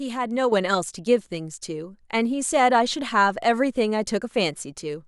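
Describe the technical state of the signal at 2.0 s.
At 2.0 s the signal sits inside a sudden gain jump that starts at 0.52 s and holds to the end of the clip. At 0.52 s the level stepped up by about 7 dB in one go rather than rising smoothly, most likely because a digital gain setting or bit shift was applied without a ramp. The speech and its background noise are both lifted together, so the noise floor at 2.0 s is higher than before the jump.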